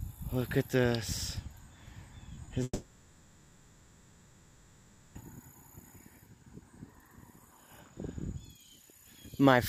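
Short concealed packet loss at 2.35–2.39 s and again at 2.45–2.49 s: each time about 20 ms of audio failed to reach the decoder, and the receiver extended the preceding sound to cover the gap, so there are two quick smeared wobbles close together.

Long network dropout from 2.63 to 5.17 s, likely caused by a stall in the network: roughly 2.5 s of audio never arrived. The receiver continued the last sound as a fading buzz or hiss, then left near-silence, and the audio resumes at 5.17 s without the missing stretch.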